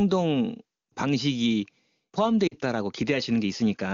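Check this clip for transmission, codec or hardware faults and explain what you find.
Two brief dropouts are audible in this speech clip.

Lost AMR speech frames at 0.90–0.95 s and 2.47–2.55 s: corrupted frames were replaced by repeating the last good pitch and vocal-tract settings at falling gain. The first is a short warble, consistent with one 20 ms frame. The second, about 40 ms, drops to near silence before speech returns.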